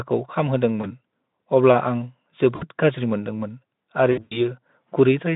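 VoIP packet loss concealed by the speech codec at 0.81–0.91 s, 2.55–2.64 s and 4.11–4.39 s: the decoder stretches the last pitch into fading buzz, worst in the scattered 200 ms stretch.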